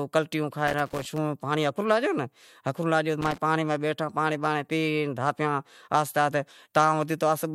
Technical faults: loose connector crackle

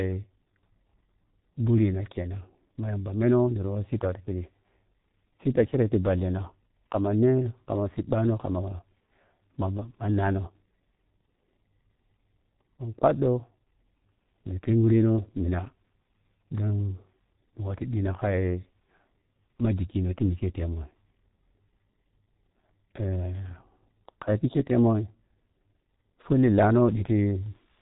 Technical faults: G.723.1 codec

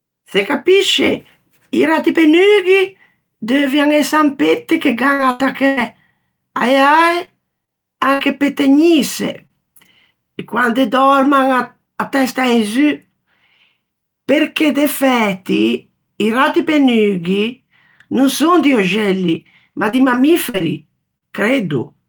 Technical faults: burst of packet loss; short concealed packet loss; repeated packet loss (robotic sound)

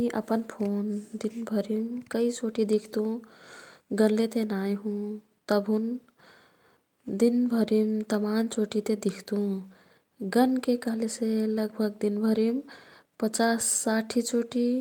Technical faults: none

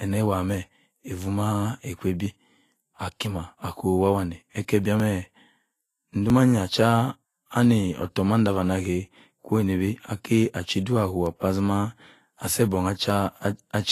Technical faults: Vorbis compression; dropped buffer (overrun)

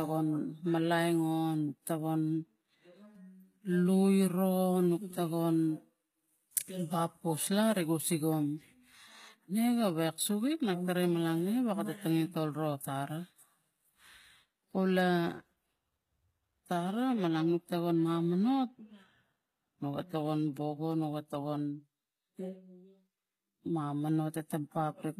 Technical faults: HE-AAC compression

